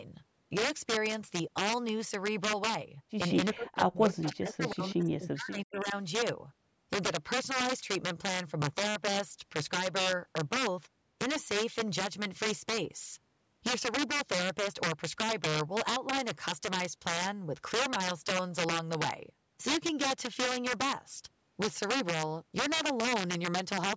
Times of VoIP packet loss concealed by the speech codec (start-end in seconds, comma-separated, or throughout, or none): none